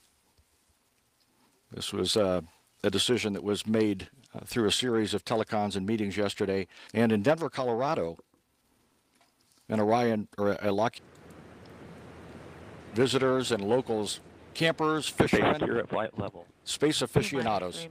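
No technical faults are audible.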